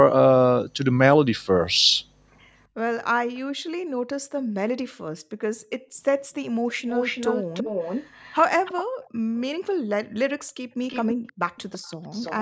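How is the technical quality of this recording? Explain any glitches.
The recording has two linked call faults: a delayed echo of the speech coming back, and the room background cutting out at intervals.

An echo leak appears briefly at 3.34 to 3.40 s, then from 6.72 to 8.83 s and from 10.87 to 12.4 s. Each time, a copy of the speech trails the original by about 332 ms. The copy is faint at first, then much stronger, then moderate. This is likely one side's loudspeaker sound reaching its microphone and slipping past the echo canceller. It differs from room reverb because it repeats at a fixed delay.

Background gated by the echo canceller occurs from 3.56 to 4.10 s, 5.18 to 5.97 s, and 8.88 to 11.24 s. The room sound drops by about 40 dB for short spans while the canceller suppresses the microphone, then returns. Unlike the echo, nothing is added. The ambience simply vanishes and comes back. 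The call's microphone filtering, with nothing above 8 kHz, is normal.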